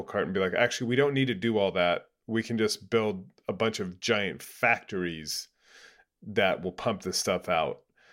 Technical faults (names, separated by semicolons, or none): none